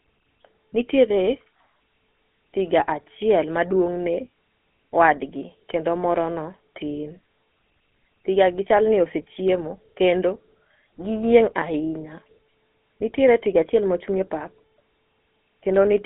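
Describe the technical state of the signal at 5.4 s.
At 5.4 s, as throughout the clip, the speech carries GSM full-rate codec damage. The voice is rebuilt from a vocal-tract model driven by sparse regular pulses, which fits 13 kbps coding, so it sounds plainly buzzy and gravelly. A clean telephone band-limit would sound thin but smooth. Here the band runs roughly 200 Hz to 3.5 kHz, with nothing above 3.8 kHz.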